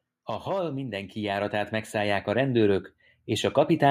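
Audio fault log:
0.44 to 3.9 s, automatic gain rising. The level climbs steadily by about 12 dB until the clip ends. The gain control judged the input too quiet and kept raising it. Speech and background noise swell together, so the room grows louder along with the voice.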